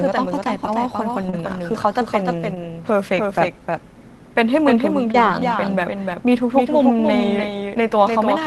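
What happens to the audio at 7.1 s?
At 7.1 s you're still hearing the doubled audio track that runs through the whole clip: a second, dry, full-band copy trailing roughly 300 ms behind and about 5 dB quieter. That's likely a slower capture path picking the speech up twice.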